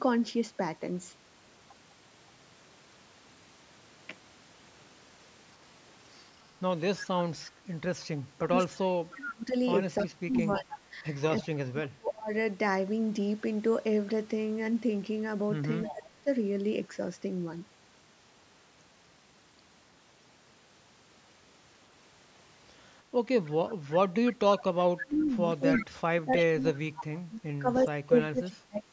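From 8.37 to 12.31 s the speech dips and breaks up in pieces, falling by as much as about 30 dB across roughly three seconds in total. This is speech suppressed in double talk. With both sides talking at once, the echo canceller could not tell this talker apart from the loudspeaker echo and likely turned everything down. The same dropouts return more briefly at 15.90 to 16.27 s (about 20 dB) and at 23.63 to 23.69 s (about 15 dB), then heavily from 25.04 s to the end, again reaching about 30 dB over roughly three seconds.

Overlapping the first dip, from 9.16 to 11.46 s, a delayed copy of the speech trails 314 ms behind, about 15 dB under the main signal. This is echo leak. The far side's echo canceller likely failed to remove all of the loudspeaker sound its microphone picked up, and the remainder was sent back. A short scrap of it appears at 15.83 to 15.94 s. A longer, stronger stretch runs from 23.46 to 26.44 s, only about 10 dB below the speech, with the same 314 ms delay.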